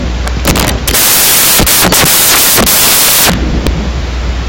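From the first moment to the last, the speech is buried under samples built from the wrong bytes. Whatever read the file assembled each sample's bytes out of order or off by one, so the jittery low-order bits ended up steering the big part of every value. You get a wall of loud, harsh noise across the whole clip, close to white on the louder speech.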